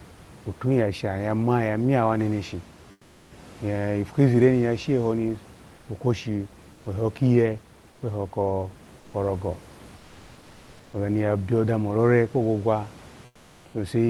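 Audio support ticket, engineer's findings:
Comfort noise in place of the background at 2.91–3.31 s (after "ma yamya wo neneshi", before "eipu kizire ni ya"), 5.75–5.87, 6.73–6.85, 7.91–8.01, 8.99–9.13 and 13.25–13.73 s. In these pauses the room noise goes flat and featureless and drops about 1 to 5 dB. The likely cause is Opus DTX synthesising noise between speech. Unlike a dropout, the gaps never go silent.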